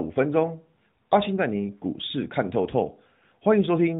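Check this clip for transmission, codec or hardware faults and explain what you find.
Nothing here points to a transmission, codec or hardware fault; the speech simply carries the narrow, phone-call character of the AMR narrowband mobile codec it went through.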